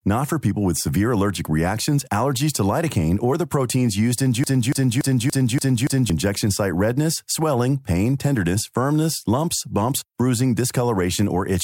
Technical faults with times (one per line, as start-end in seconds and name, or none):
4.44-6.10 broken-record loop